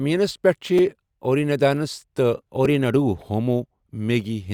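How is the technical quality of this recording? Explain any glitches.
The recording has two short glitches, both repeated buffers, at 0.78 s and 2.65 s. In each, fresh audio failed to reach the playback device in time, so it replayed the block it already held. Each repeated piece lasts about 5 ms, which fits a 256-sample buffer. It plays twice more at 0.78 s and once more at 2.65 s, with a hard join at each repeat. At that size the stutter is heard as a brief click or buzz, and it drops about 10 ms and 5 ms of the speech.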